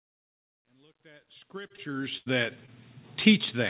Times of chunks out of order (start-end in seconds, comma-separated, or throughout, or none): none